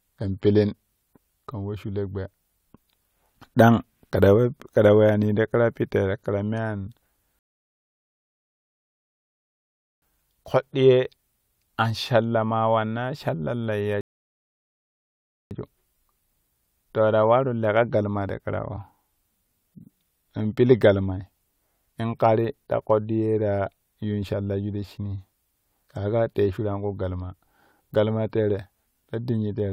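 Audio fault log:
7.39–10.02 s and 14.01–15.51 s, rebuffering stall: the speech drops into dead silence for about 2.6 s and then 1.5 s, then picks up exactly where it left off. The player ran dry of downloaded audio and waited for more, so nothing's missing, just time added.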